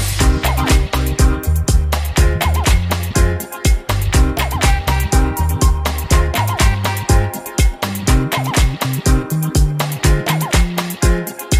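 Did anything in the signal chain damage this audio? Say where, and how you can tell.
No, nothing in the signal chain damaged this audio.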